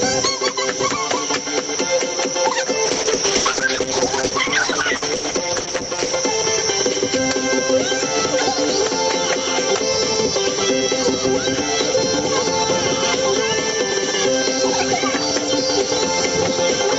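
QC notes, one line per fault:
throughout, gain pumping: The level swells up in the gaps and ducks under each loud sound, a swing of about 5 dB, so loud and soft parts sit squashed closer together. The likely cause is gain set far too high for the microphone, with a fast limiter or compressor pulling it down on every loud sound.
2.86 to 6.23 s, call bitrate drop: The sound loses quality and grows coarser, then clears again at 6.23 s. The call's bandwidth estimate fell, so the Opus encoder dropped from 48 to 10 kbps, holding its lowest rate for about 3.3 s. With far fewer bits, every stretch is coded more crudely.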